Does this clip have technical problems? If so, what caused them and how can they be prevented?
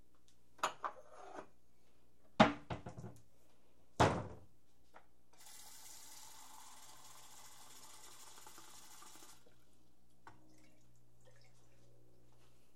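Yes. Video or display buzz runs throughout the clip, a steady buzz at 60 Hz with a gritty hash riding above it, sitting roughly 30 dB below the sound. A screen or its video cable sat close to the audio wiring or shared its ground, so the picture's 60 Hz field scan coupled into the signal path. Keeping audio cables and interfaces away from monitors and video leads, and grounding both systems at one point, prevents it.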